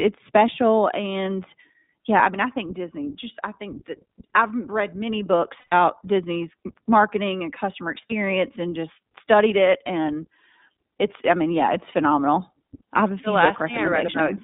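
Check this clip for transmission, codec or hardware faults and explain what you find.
Yes, two faults are present: iLBC codec coloration throughout and two short dropouts from lost iLBC frames.

iLBC codec, whole clip: speech sounds rough and slightly synthetic, confined to 200 Hz–3.7 kHz. The spectrogram shows nothing above 3.7 kHz, consistent with 15.2 kbps, 20 ms frames.

Lost iLBC frames, 5.60–5.74 s after "I've read many books" and 8.09–8.12 s between "marketing and customer" and "and just studied it": the decoder repeats the last pitch cycle with noise, giving a held, buzzy vowel. The waveform shows a repetitive periodic stretch and the spectrogram shows smeared harmonics. The first gap spans 120 ms, which fits about six lost frames, and recovery is immediate.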